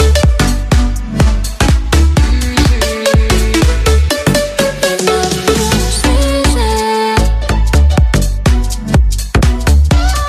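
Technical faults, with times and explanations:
No technical faults can be heard in this audio. There is no event at any point that would need a time or an explanation.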